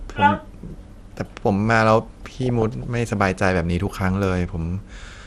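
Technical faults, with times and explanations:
Throughout: MP2 compression gives dull, muffled speech with a gurgling, granular edge. This is likely from MPEG Layer II coding near 80 kbps, which switches off upper sub-bands and coarsely quantises the rest.
2.13–2.85 s and 3.87–4.01 s: DAB burbling, heard as short blips of noise. Bit errors slipping past error correction corrupt the MP2 audio data, putting short blips of noise into single sub-bands.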